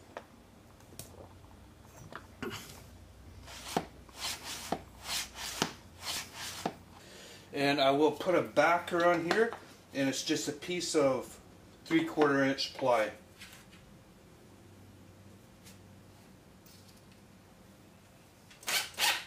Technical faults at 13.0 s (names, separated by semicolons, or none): none